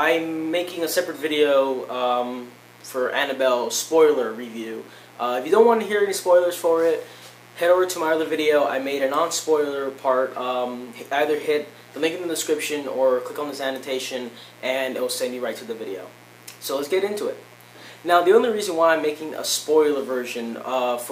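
A steady, raspy mains buzz runs under the whole 21 seconds of audio, sitting roughly 30 dB below the main sound. It's built on 60 Hz, with a dimmer, rectifier or poor shielding letting sharp spikes in twice per cycle, so the harmonics stack well up into the kilohertz range.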